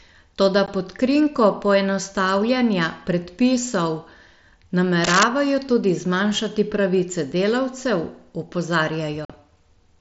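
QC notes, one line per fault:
0.66 s and 9.25–9.30 s, unconcealed Bluetooth headset packet loss: the sound drops out abruptly, leaving a hole with hard edges that can click. The first, a 15 ms gap, falls right before "pod krinko poenostavljanja predpisov". The second lasts 45 ms near the end. The gap lengths fit a couple of packets and then about six packets of 7.5 ms going missing on the hop between headset and phone of the mSBC link. Nothing was filled in, so silence or an idle pattern replaced the audio.
5.03–5.23 s, cable scratch noise: a dense, uneven burst of scratching and rustling sits over the speech for about a fifth of a second, roughly as loud as the voice itself, ending just before "tudi zmanjšati pravice delavcev". This is likely a worn cable, plug or control being moved, with its contact resistance flickering rapidly and injecting irregular noise into the signal path.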